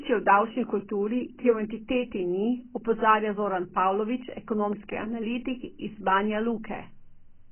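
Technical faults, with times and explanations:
Throughout, AAC compression: speech is dull and smeared, with nothing above 3.1 kHz. This is likely heavy AAC-LC coding at a bitrate around 12 kbps.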